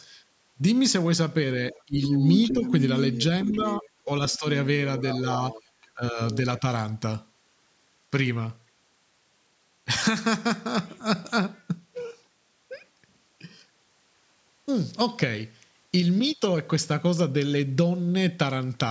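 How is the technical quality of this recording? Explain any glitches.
The recording is a speech call with two related glitches in its first seven seconds.

From 1.7 to 4.38 s, and again from 4.98 to 6.59 s, a second voice leaks through. It is likely the other side's voice leaking through: loudspeaker echo the canceller missed. It sits roughly 5 dB under the talker at first, then near 15 dB under.

In those same stretches the talker's own speech is suppressed in double talk. It dips at 1.86–1.97, 2.53–2.63, 3.46–4.46 and 5.94–6.19 s. The canceller likely took both voices for echo and ducked them, by up to about 25 dB.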